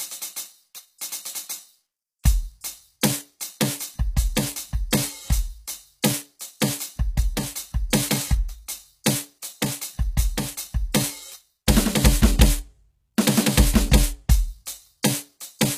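From start to finish the music carries HE-AAC compression damage, plainly audible and consistent with a low bitrate around 20 kbps. The upper band sounds gritty and metallic, with cymbal-like content lispy, because the treble is likely rebuilt from copied lower bands rather than coded directly. On a spectrogram the top shows blocky, repeated texture above the crossover and nothing at all above 14.9 kHz.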